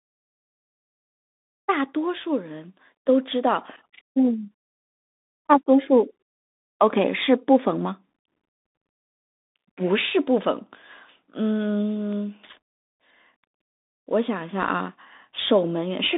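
From start to finish the speech passes through a Bluetooth CVSD headset codec. The band is held to roughly 200 Hz to 3.7 kHz, with nothing above 3.8 kHz, so a spectrogram shows a hard ceiling and an empty top. CVSD sends one bit per sample, stepping up or down, at a rate that fits a 64 kbps stream. Loud high sounds outrun its adapting step and distort, s sounds turn scratchy, and a granular hiss fills the floor of the waveform between syllables.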